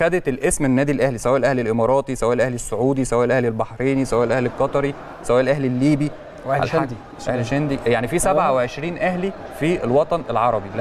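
From 3.62 s to the end, the audio shows channel delay (comb filtering). One channel is late by about a single sample, roughly 0.02 ms, and summing the two to mono cancels content at a first notch near 20 kHz. With the notch that high, the effect is a gentle dulling and loss of air rather than obvious hollowness. A spectrogram shows the top band fading from 3.62 s onward, while the waveform looks almost unchanged.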